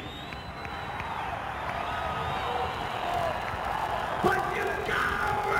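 From 2.7 s to the end, a block size mismatch (padded) sets in: each block that one stage writes is shorter than the block the next stage reads, so the remainder is filled with silence. This puts a small gap in every block, heard as a steady 43.1 Hz buzz, which fits a 1024-sample read block. The audio slows to 0.861 times normal speed while its timbre stays put, which rules out a sample-rate mismatch.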